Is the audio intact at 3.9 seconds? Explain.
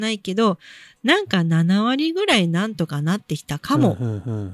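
Yes, the speech at 3.9 seconds is intact, with no dropout, click, distortion or other fault audible at that moment.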